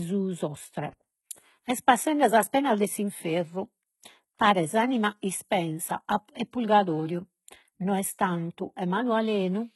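HE-AAC compression is heard throughout this speech: the treble is synthetic, with s sounds turning gritty and lispy, and nothing above 11.8 kHz. The likely cause is spectral band replication rebuilding the highs from lower bands, with the heavy damage fitting a bitrate near 16 kbps.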